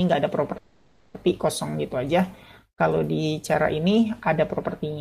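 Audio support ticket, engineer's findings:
Call audio freeze, 0.57–1.16 s: sound stretches into a fading buzz, then resumes where it stopped, about 0.57 s late. Likely jitter buffer underrun; unlike a dropout, nothing is cut.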